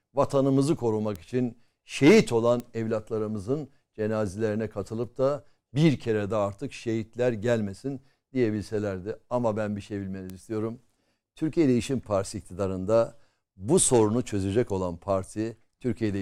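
At 1.16 s, just before "için şehit olan evlatlarımızın", there's a bit error spike: a single sample flipped, jumping to about -16 dBFS and straight back, giving one sharp broadband tick. It repeats at 2.6 s, between "için şehit olan" and "evlatlarımızın cenazelerine katılıp da", and at 10.3 s after "ben bir şey".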